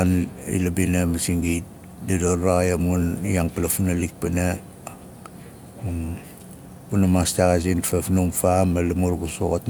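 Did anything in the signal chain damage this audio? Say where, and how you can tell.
No, nothing damaged this audio.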